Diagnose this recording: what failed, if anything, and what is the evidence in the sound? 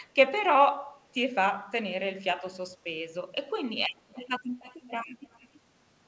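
The failure is in call processing: an echo leak. A faint delayed copy of the speech, about 305 ms behind, surfaces at 3.91–4.28, 4.62–4.90, 5.07–5.11 and 5.27–5.60 s, getting fainter toward the end. Likely a far-end speakerphone whose echo canceller let some of the speech its microphone picked up slip back.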